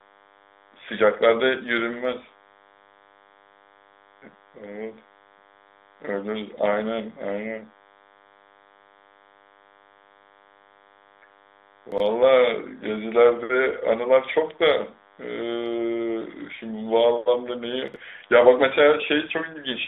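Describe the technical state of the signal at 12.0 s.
Between 11.92 and 12.0 s there is a chunks-out-of-order fault: a 20 ms block arrives three blocks late and plays after the material meant to follow it, so the sound jumps back briefly at the hard joins. Unlike a dropout, nothing goes missing; the audio is only reordered.

Under this moment, as across the whole clip, runs DECT cordless phone buzz: radio bursts every 10 ms are rectified into a steady, thin 100 Hz buzz rich in harmonics, roughly 35 dB below the signal. Its exact 100 Hz rate and bright harmonic edge set it apart from smoother 50 or 60 Hz mains hum.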